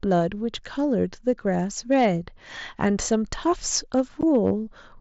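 The signal was driven past what a stage could pass, so hard clipping flattens the peaks of the speech from 1.92 to 2.07 s and again from 2.84 to 3.15 s, each by about 3 dB. The squared-off tops add high harmonics, heard as a gritty crackle on the loudest syllables.

The overload returns from 3.73 to 4.50 s at about 4 dB, again crackling on the peaks across that stretch. Within it, at 4.21 s, there is unconcealed Bluetooth headset packet loss. Audio between headset and phone went missing and nothing filled the gap, leaving an abrupt 15 ms hole, consistent with a couple of dropped frames. The mSBC link's light graininess on loud sounds sits under all of this.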